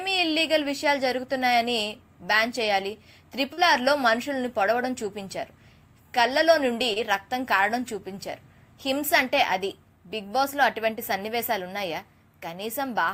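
At 3.53 s and again at 6.93 s, short concealed packet loss occurs. About 40 ms, then about 20 ms, arrived too late to decode. The receiver extended the preceding sound to bridge each gap. Each sounds like a brief smear.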